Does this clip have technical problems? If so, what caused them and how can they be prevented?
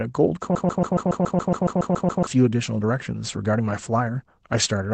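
Yes. There's clock drift between sender and receiver running all the way through. The sender's clock is running about 5% fast, so the receiver's jitter buffer keeps filling up and has to throw audio away to keep up. You'd fix this by having the receiver resample adaptively to match the sender's actual rate.

That drift shows up as repeated timing corrections from 0.11 s to 4.8 s, with speech effectively pushed through at 105% speed. The receiver keeps cutting out short slivers at uneven spacing, so you get little hiccups and a slightly rushed, unsteady rhythm. Smooth, drift-compensating playout instead of hard cuts would make these inaudible.

There's also a broken-record loop from 0.55 s to 2.27 s. A 0.14 s fragment plays back to back twelve times, and whatever should have been heard there is simply gone. It's likely that the player, encoder or stream stalled and kept resending its last buffer. 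A watchdog that detects stalls and outputs silence instead of recycling the buffer would prevent it.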